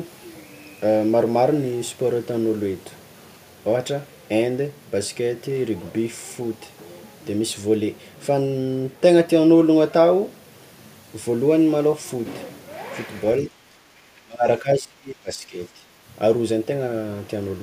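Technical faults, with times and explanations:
13.46–15.59 s and 15.75–15.84 s, speech suppressed in double talk: The speech level falls sharply for about two seconds, with a deep drop of around 25 dB at its worst. A second, shorter dip of roughly 10 dB follows. This is likely the echo canceller reacting to both sides talking at once. It cannot separate the near talker from the loudspeaker echo, so it turns the whole signal down and takes the speech with it.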